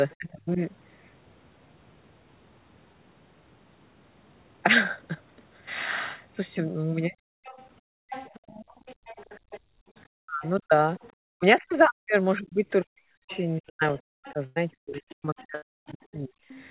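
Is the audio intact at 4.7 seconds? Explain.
Yes, the speech at 4.7 s is intact, and the dull, narrowband sound there is just the normal call path, whose G.711 mu-law coding leaves nothing above 4 kHz.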